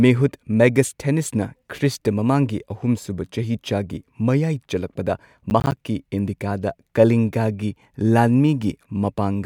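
The processor in this speech clip fell behind for a moment: from 5.5 to 5.77 s, just after "ꯁꯨꯕ ꯆꯍꯤꯆꯥꯒꯤ ꯃꯌꯥꯏ ꯆꯜꯂꯛꯄꯗ", it missed a run of buffer deadlines, which fits several misses of buffers around 10 ms long. Each missed buffer drops out to silence with abrupt edges, and together those tiny holes produce a short burst of processor overload crackle, a gritty tearing over the sound that stops once the load eases.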